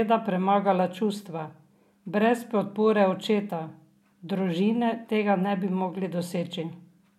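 Speech, with no technical fault audible anywhere in the recording. There is nothing here to place at a time or trace to a cause.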